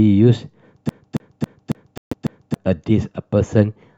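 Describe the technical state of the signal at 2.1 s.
At 2.1 s two things overlap. The sound is caught in a CD stuck on one turn from 0.89 to 2.54 s: a scratch keeps kicking the laser back a track, so the same 275 ms slice of speech repeats six times, each jump marked by a tiny mute, giving that quick, even stutter.

Inside that loop, from 1.98 to 2.14 s, the audio cuts out completely for about 140 ms, then returns further along as if it had kept playing. That's likely a Bluetooth dropout, with packets arriving too late for the headphones and being discarded.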